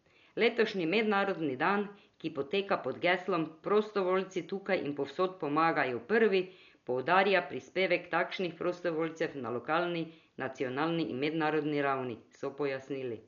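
Dolby Digital compression is the likely cause of the heavy damage throughout the speech: nothing is left above 7 kHz, and the empty frequency lines are filled with dither noise, giving a dull, rough, fluttering sound that fits a bitrate around 48 kbps.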